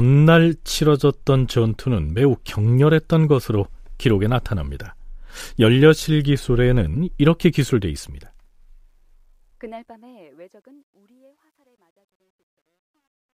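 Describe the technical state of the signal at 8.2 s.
At 8.2 s the speech sits inside truncation distortion on a fade, running from 7.73 s to 13.35 s while the level fades out. The fade keeps too few bits without dither, which fits a 12-bit path. The quiet tail turns grainy, worst from 10.13 s to the end. On the waveform the low-level signal flattens into square steps, and a spectrogram shows broadband grit smeared across the fading speech.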